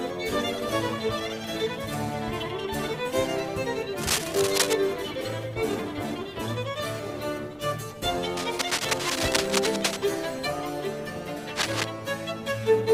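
A worn cable, connector or control being moved is the likely cause of the cable scratch noise here, its contact resistance jumping erratically. Dense, ragged scratching bursts, roughly as loud as the sound itself, break in from 4.01 to 4.73 s, 8.37 to 9.97 s and 11.55 to 11.84 s.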